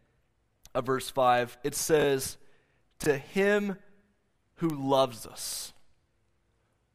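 At 1.38 s, just after "of verse", there is a bit error spike: a single bit flipped somewhere in storage or transfer, pushing a very short run of samples off by a power of two before they snap back. It comes through as a sharp, broadband tick that has nothing to do with the speech around it. The same fault recurs as isolated ticks at 4.70 s, where the brief click points to a single corrupted sample, and at 5.53 s.

Between 2.00 and 2.04 s the audio has chunks out of order. A 20 ms block arrived or was written one chunk late, so it plays after the block that should have followed it. No audio is missing, but the sequence is scrambled and three hard joins are created. The result is a brief garbled stutter. The same fault appears again from 3.02 to 3.06 s, also one 20 ms chunk late.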